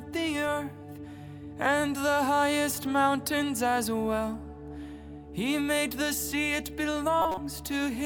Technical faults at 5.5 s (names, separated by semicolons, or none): none